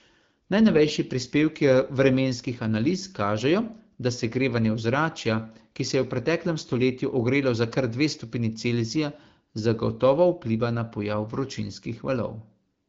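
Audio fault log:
No faults detected in this recording.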